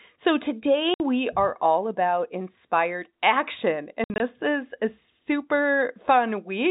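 A speech clip over G.711 telephone coding shows packet loss filled with silence. A hard 60 ms gap opens at 0.94 s. From 4.04 to 4.2 s, 100 ms drops out in pieces, longest 60 ms. The gaps have hard edges and fit 20 ms packets.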